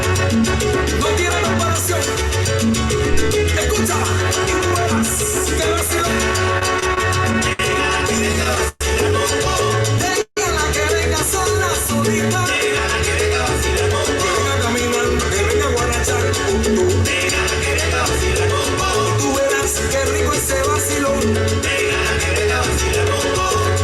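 At 3.13 s there's a phantom power thump: a deep, low thud that dies away in about 36 ms, with the whole disturbance over by roughly 3.3 s. It's the sound of a supply being switched on or off while the input was live, so the voltage step pushed through the coupling capacitors and came out as one low-frequency bump instead of a click.

From 6.59 s to 8.83 s you get repeated stalls, a stutter. The audio stops briefly twelve times across that stretch, each time holding and smearing the last bit of sound before moving on, with the longest hold around 122 ms and about 330 ms filled in altogether, roughly 15% of the span. The packets were arriving late, so the jitter buffer kept running dry and the receiver stretched what it had. Nothing drops out, but the passage drags and hiccups.

At 10.21 s there's a short call audio freeze lasting about 0.15 s. The last sound hangs on and fades, and about 90 ms of that is plain silence before the audio picks up exactly where it stopped, so the rest of the clip now runs about 153 ms late. 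The likely cause is packets held up in transit, leaving the jitter buffer empty until they arrived.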